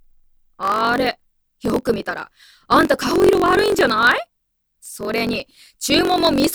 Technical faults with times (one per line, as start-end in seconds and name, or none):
0.00-6.54 block size mismatch (truncated)